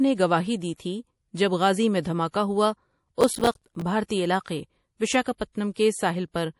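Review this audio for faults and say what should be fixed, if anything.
MP3 compression runs through the whole speech recording: nothing remains above 11.5 kHz, and weaker detail flickers in and out between frames, giving a watery, swirly edge to sibilants. The damage is plainly audible and points to a low bitrate around 48 kbps, likely from an MP3 encode. Prevent it by working from the original or lossless source, or by encoding at a much higher bitrate.

Pre-echo appears at 0.77 s, 4.08 s and 5.22 s, as a hiss lasting 27 ms, 27 ms and 34 ms before sharp onsets. Each attack sits late in a codec block, so quantisation noise scaled for the loud onset spills into the quiet gap ahead of it, softening the attack. Prevent it with an encoder that switches to short blocks on transients, or a higher bitrate.

Processor overload crackle tears through the speech from 3.21 to 3.82 s. The processor repeatedly missed its deadlines for small buffers of about 5 ms, some thirty of them, and each miss dropped in a hard-edged slice of silence, so the gaps pile up into gritty crackle until the load eases. 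Prevent it with larger audio buffers or by reducing the processing load during recording or playback.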